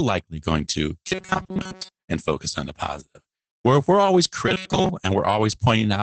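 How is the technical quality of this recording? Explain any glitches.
The recording has low-bitrate Opus voice compression all the way through, plus two short stretches where it turns robotic.

Opus voice compression: the band tops out around 8 kHz, and the coarse SILK coding makes the speech a bit muffled and hoarse with a slightly synthetic edge. That fits Opus in voice mode at roughly 12 kbps, and the damage is plainly audible.

Robotic sound from repeated short buffers: from 1.08 to 2.03 s, after "going to" and before "and focus on the", and again from 4.48 to 4.90 s, after "if we're always", the speech goes into a rigid metallic buzz at 188 Hz. It's likely the player running out of fresh audio and looping a tiny chunk, about 5.3 ms, covering most of each stretch.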